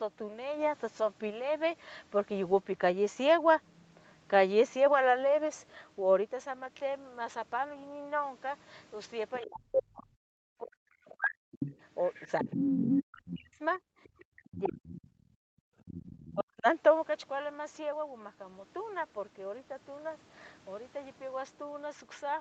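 From 9.33 to 9.8 s a second voice sits under the speech at about 5 dB below it. This is the other side's voice leaking through, likely loudspeaker echo the canceller failed to remove. It returns at 11.1–13.39 s, 14.04–15.22 s (about 10 dB down) and 15.86–16.33 s (about 20 dB down). On a spectrogram it shows as a second set of harmonics crossing the main ones.

Over 9.4–11.61 s, 12.28–15.63 s and 16.33–16.66 s the speech is suppressed in double talk, likely because the canceller turned down both voices at once. The talker fades or cuts out in pieces. The waveform envelope caves in and drops by around 40 dB at its deepest, and the spectrogram goes dark in patches.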